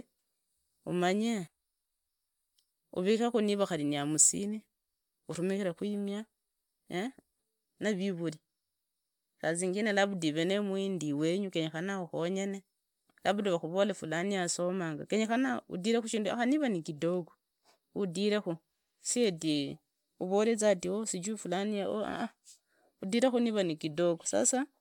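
A speech recording, and there's nothing technically wrong to point to anywhere in it.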